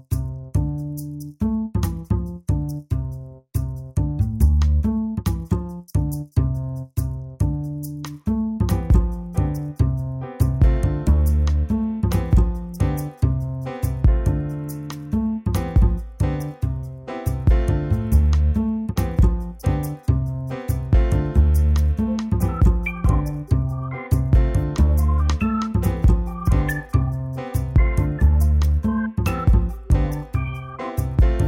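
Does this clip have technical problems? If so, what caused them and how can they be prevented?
Yes. From 20.78 s to the end, the resampler restarted on every block. Each 20 ms block was converted on its own, apparently from 48 kHz to 44.1 kHz, so the filter treated the block edges as silence or the block's other end instead of continuing from neighbouring samples. Each boundary therefore carries a small error, and these repeat at 50 Hz as a buzz under the sound. To prevent it, keep the resampler's filter state running continuously across blocks.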